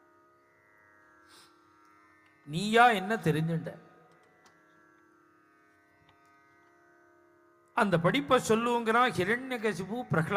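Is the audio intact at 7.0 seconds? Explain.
Yes, the audio is intact at 7.0 seconds, with no audible dropout, click, distortion or other fault at that point.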